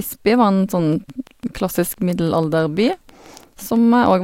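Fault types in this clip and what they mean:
Train of clicks: A run of near-identical pulses is laid over the speech from 0.93 s to 4.12 s. They arrive at a steady rate of about 6 per second, roughly twenty in all. Each click peaks at about the level of the speech itself. The ticking stays audible through the pauses as well as under the talking. Interference from nearby equipment or a faulty connection or power supply is the likely cause.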